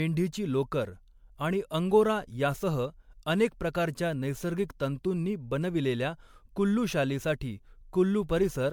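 Speech runs the whole way through with generation loss: the sound is swirly, smeared and hollow, and consonant attacks blur, more than a single encode would produce. The likely cause is repeated lossy MP3 coding, about four passes at a rate that fits 96 kbit/s, each requantising on a shifted frame grid. A spectrogram would show speckled holes and smeared transients, with nothing above about 19.9 kHz.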